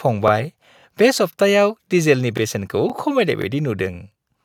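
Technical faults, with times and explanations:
0.28, 0.80, 1.33, 1.85, 2.37, 2.90, 3.42 and 3.94 s, each lasting about 23 ms: overlapping chunks. The speech was handled in 0.5 s chunks, each starting before the previous one ended, so 23.22 ms replays at every join, causing regular stutters.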